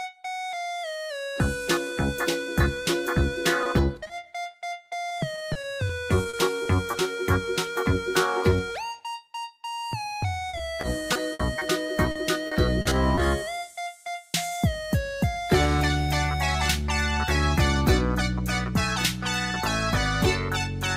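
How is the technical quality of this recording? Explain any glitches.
The recording is marred by packet loss on the transmission path, heard once as a brief isolated patch and then in three stretches of choppy, robotic sound.

From 3.63 to 3.67 s there is a short concealed packet loss: about 20 ms of audio failed to arrive in time, and the receiver bridged the hole by extending the preceding sound before rejoining the real signal. It comes across as a momentary smear or wobble.

Repeated packet loss (robotic sound) follows from 4.03 to 6.95 s, 10.49 to 11.63 s and 12.11 to 13.19 s. Packets kept going missing, each gap patched from the last sound, the longest gaps 40 to 60 ms, covering 13 to 18% of each stretch. The repeated synthetic fill gives a choppy texture with fragments missing.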